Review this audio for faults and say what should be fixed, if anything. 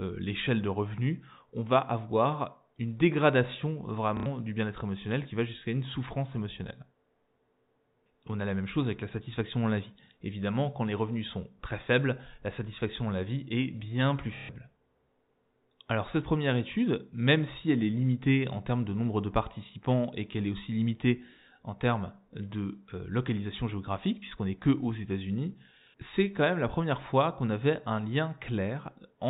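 Packet loss with last packet repeated occurs at 4.17 s, just after "une dégradation" (90 ms), and at 14.37 s, after "vie est bien plus" (120 ms). Each lost stretch is filled by replaying the last packet, so the run buzzes at roughly 33 Hz, which fits 30 ms packets. To prevent it, reduce loss on the network path and use forward error correction or proper packet loss concealment instead of simple packet repetition.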